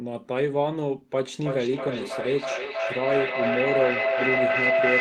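A feedback loop between two devices sharing one room on the call keeps gaining level, so this speech clip turns into a feedback howl from 1.29 s to the end. A tone of roughly 700 Hz builds up, with the loop repeating about every 0.3 s and peaking about 2 dB above the speech.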